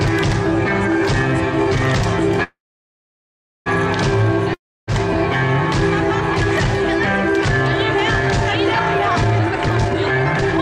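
At 2.43 s the sound stops moving forward and its last instant is stretched into a brief buzz that fades, leaving about 1.1 s of silence before the audio resumes at 3.68 s exactly where it broke off. This is a call audio freeze. Packets were likely held up in transit, so the jitter buffer ran dry and the receiver filled about 1.2 s with synthetic continuation. Nothing is lost, but everything afterwards now arrives about 1.2 s later.

From 4.54 s to 4.89 s there is another short fading buzz, followed by roughly 0.29 s of silence. When the audio returns, it has skipped ahead rather than picking up where it stopped. This is a long network dropout. Audio likely never reached the receiver for this stretch. The receiver concealed about 0.34 s of the gap, and about 0.34 s of the original sound is gone for good.

From 9.39 s through to the end at 10.61 s, the audio suddenly runs hurried, at about 151% of normal speed, while its pitch stays unchanged. 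This is a jitter buffer speed-up. After more audio had built up in the buffer than its target, the receiver repeatedly cut out tiny slices, one or a few pitch periods long, to bring the delay back down. Those cuts remove roughly 0.7 s of material in total.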